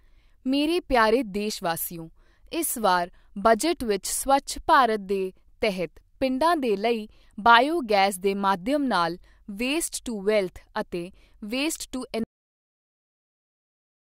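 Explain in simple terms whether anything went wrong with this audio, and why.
The recording was cut short: the final chunks of audio were never saved or played, a fault called a cut-off end. At 12.24 s the speech stops abruptly in the middle of a sound instead of finishing naturally. There's no fade and no tail of the voice dying away, just an instant drop into complete digital silence that lasts for the remaining seconds until the file ends.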